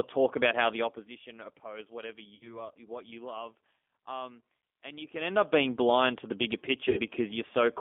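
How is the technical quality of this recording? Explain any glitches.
The technical quality is limited: the speech is plainly coded over a narrow telephone band, with two concealed dropouts.

G.729 codec damage runs throughout. It resynthesises speech at 8 kbit/s from a vocal-tract filter, a pitch predictor and a few pulses per frame, within roughly 250 Hz to 3.5 kHz. The result is plainly rough, slightly synthetic and thin.

VoIP packet loss concealed by the speech codec occurs from 2.35 to 2.70 s, between "oppose whatever" and "what you love", and from 6.89 to 7.01 s, after "blind to the bigger". About 60 ms and 80 ms of audio were lost, which fits three and four 20 ms packets. The decoder extended the last pitch and filter with falling gain, so the sound turns into a buzzy tone or coloured noise that fades, then stays weak briefly afterwards.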